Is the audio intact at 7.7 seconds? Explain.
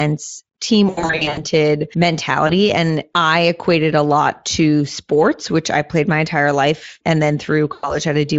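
No. Packet loss concealed by the speech codec breaks the audio from 7.73 to 7.98 s, just after "entire life and then". About 100 ms of packets went missing, which fits five 20 ms frames. The Speex decoder filled the gap by repeating its last pitch and filter while lowering the gain frame by frame. The speech smears into a fading buzzy, coloured tone. It stays weak and distorted for a short while after packets resume.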